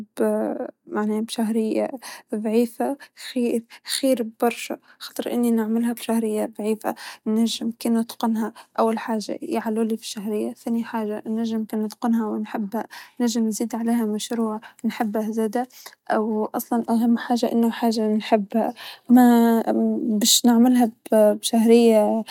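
No technical faults can be heard in this recording.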